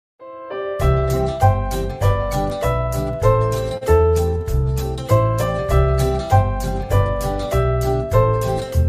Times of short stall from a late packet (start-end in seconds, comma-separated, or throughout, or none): 3.77-3.83